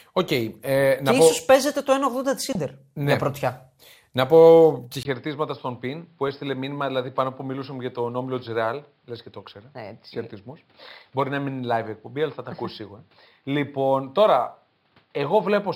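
Speech clip with three faults. Sample clock jitter runs throughout. The converter's clock wanders by roughly 2 µs rms, so samples land early or late. The error sits around 40 dB below the signal. It adds a hiss or roughness that grows on loud and bright passages and disappears in silence. DAB burbling appears at 2.41 to 2.55 s and again at 9.48 to 9.56 s. Bit errors slip past the error correction into the MP2 data. Corrupted samples throw short blips of noise into single sub-bands. At 5.03 s there is a 20 ms silence. From then to the end, nothing passes above 5.3 kHz. The level drops by roughly 5 dB, and a new noise floor sits roughly 40 dB below the signal. The sound turns dull. The likely cause is the input switching to a poorer device.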